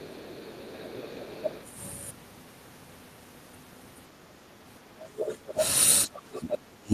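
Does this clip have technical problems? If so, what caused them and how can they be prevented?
Yes. From the start to 1.64 s a faint second voice sits well beneath the speech, and from 5.18 to 5.65 s it returns much louder, only a little below the talker. This is the other side's voice leaking through. The likely cause is a loudspeaker on the talker's device feeding the far end back into the microphone, with the echo canceller failing to remove all of it. A headset, or a better-converged echo canceller, would prevent it.

The speech itself dips in three places: briefly and slightly around 0.83 to 0.87 s, more deeply from 5.12 to 5.59 s, and almost to silence from 6.06 s to the end. This is speech suppressed in double talk. When both sides talk at once, the echo canceller likely cannot tell the talker from the loudspeaker echo, so it attenuates everything to hide the echo. A headset, or an echo canceller with reliable double-talk detection, would prevent it.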